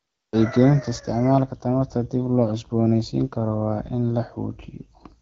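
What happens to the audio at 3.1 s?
Nothing goes wrong at 3.1 s: the speech there comes through intact, carried by the AMR wideband (HD Voice) codec at 12.65 kbit/s with only the light coding character expected at that rate.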